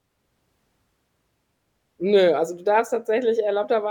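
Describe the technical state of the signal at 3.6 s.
At 3.6 s the speech signal is intact, with no audible fault at that moment.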